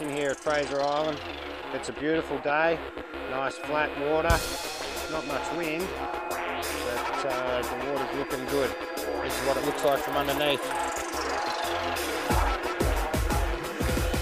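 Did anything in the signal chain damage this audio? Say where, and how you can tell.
No, nothing in the signal chain damaged this audio.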